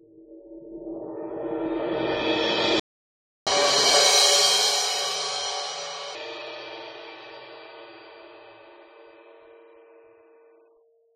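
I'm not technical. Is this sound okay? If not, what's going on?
No. At 2.80 s the music cuts out completely and stays silent until 3.47 s, about two-thirds of a second. This is a playback stall: the player most likely ran short of data and had to wait.

From 3.47 s to 6.15 s the music plays 1.25 times too fast and sounds roughly four semitones higher, like a sped-up tape. This is catch-up at higher speed: the player races through the backlog to regain the lost time. Unlike a simple pitch change, tempo and pitch rise together, then both return to normal at 6.15 s.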